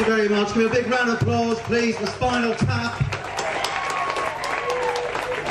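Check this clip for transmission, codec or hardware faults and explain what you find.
Nothing stood out on listening to this clip.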